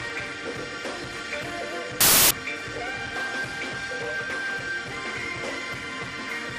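From 2.01 to 2.31 s, samples built from the wrong bytes turn the sound into broadband noise. Unlike clipping or dropouts, the mis-ordered low bits dominate each value, making it loud and harsh.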